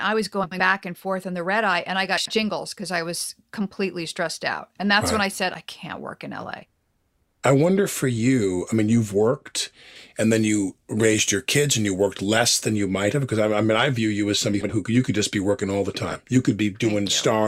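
Speech, with two problems worth flagging. There are four spots of frames out of order, heard as a garbled flutter. They fall at 0.43 to 0.60 s (just before "and forth in the"), 2.17 to 2.38 s, 14.53 to 14.72 s, and 16.11 to 16.16 s (right after "be working all the"). Neighbouring runs of frames got swapped, about 80 ms at a time in the first three. Then from 9.96 to 12.76 s, between "I mean you've worked" and "you might have because", it turns thin and hissy. That's pre-emphasis left on, with treble up about 8 dB at 10 kHz, which fits an unreversed 50/15 µs CD-style curve.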